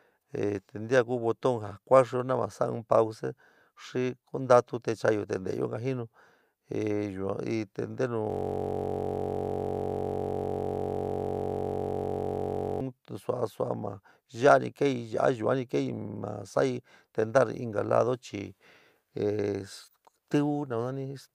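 From 8.30 to 12.81 s, a system hang loop takes over. The system froze while the sound hardware kept replaying one 21.33 ms slice of its buffer, which fits a 1024-sample buffer. It repeats about 200 times, heard as a steady buzz near 46.9 Hz, until "sua sua maa yua".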